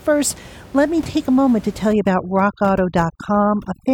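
From 1.93 s, just after "moment to tell", through to the end of the clip, the background drops away and what remains breaks into twinkling, warbling specks, while the quieter parts of the speech go with it. This is overdone noise removal: a noise reduction stage set too strong pushes individual frequency bands far down or off whenever they sit near its noise estimate, taking low-level speech detail along with the room noise, which sits about 20 dB below the speech.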